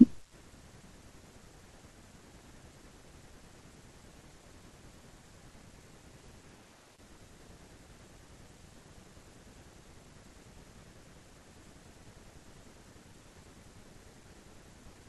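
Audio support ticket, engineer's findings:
No technical faults found in the signal path for this speech recording; nothing audible points to a failing component or setting.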